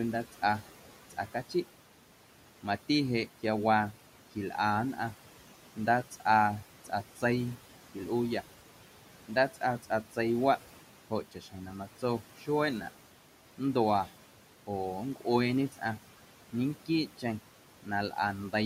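Noise suppressor artifacts run the whole way through: the room noise, about 18 dB under the speech, gets pulled down roughly 12 dB between phrases and pumps back underneath them. Speech cut by the noise suppressor shows up at 6.85–7.23, 9.28–10.17, 11.1–12.48, 14.67–15.81 and 17.83–18.53 s, where fractions of a second of quiet speech get mistaken for noise and ducked about 8 to 11 dB, sounding swallowed.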